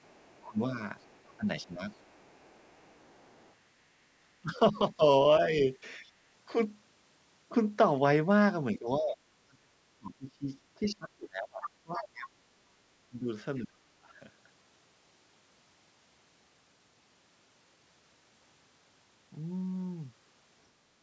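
Other side's voice leaking through, 0.03 to 3.53 s: a second, distant voice sits faintly under the talker, around 35 dB down. The likely cause is a loudspeaker on the talker's end feeding back into the microphone, with the echo canceller leaving some of it behind. It returns far more clearly from 11.62 to 12.03 s, only about 15 dB below the talker, as a brief intrusion.

Speech suppressed in double talk, 0.42 to 1.91 s and again 4.42 to 5.7 s: the talker's level sags in short patches, adding up to about half a second each time and dipping roughly 15 dB, so syllables thin out and fade, likely while the far side is also active. From 8.74 to 14.13 s it becomes severe: about four seconds in total are pushed down by as much as 30 dB, leaving the talker chopped.

Background gated by the echo canceller, 6.09 to 6.22 s: the room tone briefly drops by about 12 dB for around a tenth of a second, then snaps back. 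The canceller clamped the microphone hard while the loudspeaker played and released it as soon as playback eased. This leaves a small hole in the ambience rather than in the talker. The call's microphone processing also caps the band at 8 kHz.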